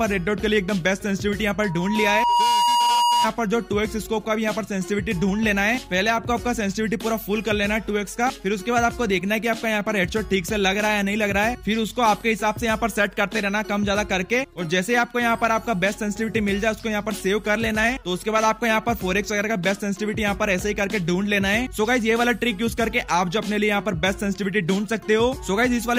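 A microphone picked up its own loudspeaker, and the loop ran away: loudspeaker feedback squeal from 1.62 to 3.28 s, a 957 Hz tone swelling over about a second to slightly above the sound.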